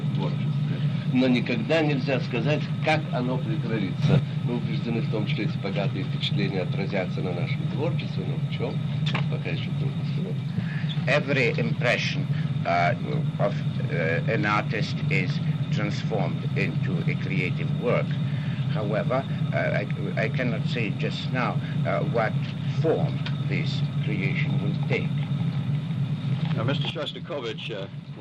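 A digital gain setting was most likely applied without a ramp, so the level jumps from one sample to the next: a sudden gain jump. At 4.02 s the sound and its background noise leap up together by about 8 dB, holding there until 4.19 s. From 26.90 s to the end they drop together by about 9 dB. Because the noise floor moves with the wanted sound, the steps are abrupt level changes.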